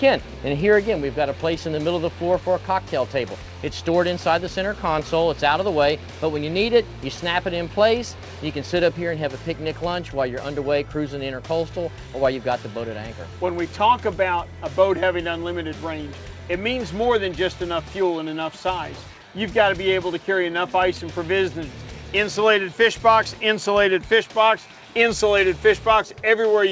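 No technical faults are audible.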